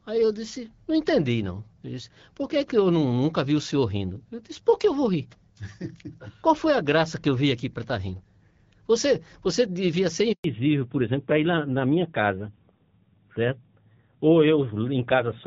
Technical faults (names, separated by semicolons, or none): handover gap; fallback to narrowband